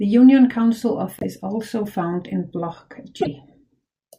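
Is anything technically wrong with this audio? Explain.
Yes. A broken MP3 bit reservoir, at 1.19–1.24 s just before "also found" and at 3.21–3.27 s, is the likely cause of two brief glitches where the speech jumps forward. Dropped 24 ms frames leave the following frames reading borrowed bits from the wrong data.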